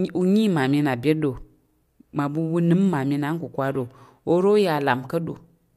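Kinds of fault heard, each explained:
Nothing wrong turns up here; the speech runs along without any glitch, dropout or distortion catching the ear.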